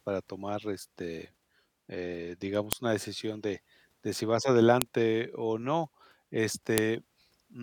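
File header played as audio at 2.73, 4.82 and 6.78 s: joined speech segments kept their WAV headers, whose bytes play as samples, giving sharp, loud clicks.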